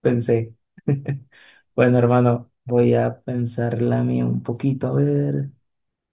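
A speech recording with no technical faults anywhere in it.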